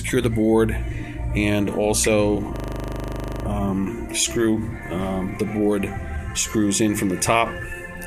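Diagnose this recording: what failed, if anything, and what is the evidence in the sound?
System hang loop at the driver or buffer stage. A stalled ring buffer replays one 40 ms slice 22 times, 2.56 to 3.44 s: a 25 Hz buzz.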